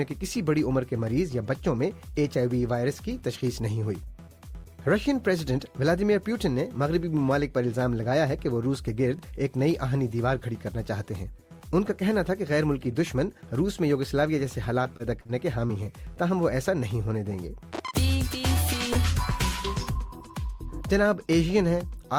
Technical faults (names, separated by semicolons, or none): repeated packet loss (robotic sound); short concealed packet loss